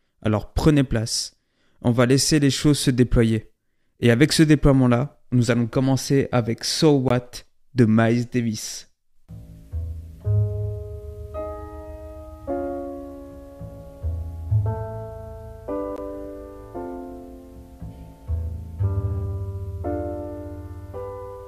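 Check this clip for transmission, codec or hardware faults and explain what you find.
Two blocks of digital silence, at 7.08 to 7.10 s (about 21 ms, fitting a 1024-sample buffer) and at 15.96 s: samples drop to zero when output is not filled in time, giving abrupt holes.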